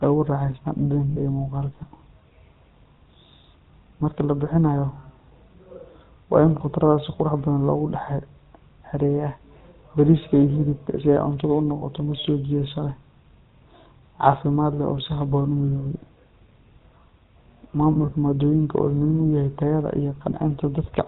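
Speech passed through the GSM full-rate codec, consistent with 13 kbps coding, which models the voice with a coarse pulse-driven excitation and nothing above 4 kHz, leaving a plainly buzzy, gravelly roughness throughout. Lost GSM frames were filled by repeating the last good frame, giving brief metallic rings at 1.1–1.2 s, 11.76–11.85 s, scattered across 17.92–18.13 s with runs up to about 40 ms, and at 20.3 s just after "yahay tayada".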